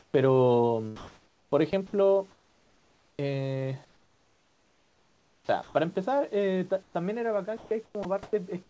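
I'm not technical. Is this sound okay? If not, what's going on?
No. From the start to 0.14 s, and again between 6.83 and 8.33 s, there is comfort noise in place of the background: the real room sound gives way to a smooth, featureless hiss. This is likely a call system pausing transmission during silence and filling the gap with imitation noise.

Between 0.96 and 5.75 s, the sound is chopped by the voice detector. About 3.2 seconds in total are swapped for that same flat hiss in two or more separate gaps, so speech sounds choppy. This is likely a voice detector repeatedly mistaking quiet parts of speech for silence.

At 8.03 s, the sound is dropped by the voice detector: a tiny slice of speech, about 20 milliseconds, disappears once into hiss rather than flickering on and off. This is likely the detector briefly deciding speech had stopped.

The audio also passed through a call line that carries nothing above 8 kHz.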